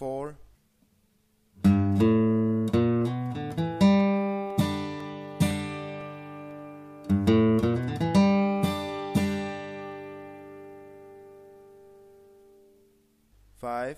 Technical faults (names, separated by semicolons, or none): periodic USB or driver dropouts